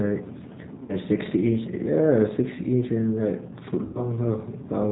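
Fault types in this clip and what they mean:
G.729 codec: Across the whole clip the speech sounds band-limited, slightly rough and synthetic, with nothing above 4 kHz and a plainly audible coded texture. This is the G.729 codec, which fits its 8 kbit/s mode. It does not send the waveform. It rebuilds each 10 ms frame from a vocal tract filter, a pitch predictor and a few pulses, which is why the result sounds artificial.
VoIP packet loss concealed by the speech codec: At 0.83 to 0.93 s and again at 3.85 to 4.05 s the speech smears into a buzzy tone or coloured noise that fades instead of dropping out, and it stays weak or distorted for a moment after normal audio returns. About 60 ms and then 100 ms of audio went missing, consistent with three and then five lost packets. The decoder filled each gap by repeating its last pitch and filter at a decreasing gain. Each frame depends on the one before it, so recovery lags behind the returning packets.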